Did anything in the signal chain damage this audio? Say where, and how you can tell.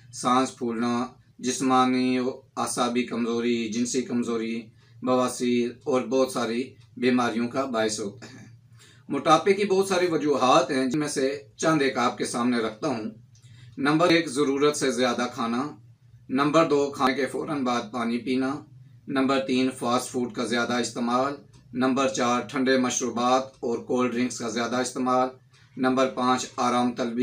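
Yes. At the codec stage, compressed frames were skipped at 10.94, 14.10 and 17.07 s. Each time the audio jumps ahead by about one 92.9 ms frame that was never decoded. Unlike a dropout, there's no silent gap.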